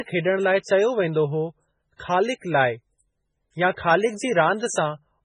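Throughout the speech the treble stops dead at 10 kHz, and what remains sounds heavily watery and swirly, with metallic chirping on sibilants. This is likely MP3 compression, at a bitrate so starved it fits something near 16 kbps. The encoder cuts everything above a fixed frequency and drops weak spectral lines that flicker on and off between frames. On a spectrogram that shows as a flat ceiling at 10 kHz and patchy, blocky islands of energy below it.

At 0.62 to 0.66 s, a span of 31 ms, and again at 2.38 to 2.42 s, spread over 35 ms, a short hiss arrives just ahead of a sharp onset, which then sounds soft and smeared. This is pre-echo. The codec spread quantisation noise sized for the loud attack across its whole block, so it also fills the quiet moment before. In the waveform a thin smear of noise rises before each transient, and the spectrogram shows a broadband haze preceding the attack.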